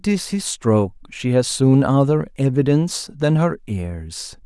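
No technical faults can be heard anywhere in this recording.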